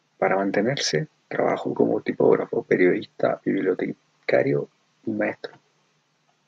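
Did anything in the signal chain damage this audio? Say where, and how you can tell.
No, nothing damaged this audio.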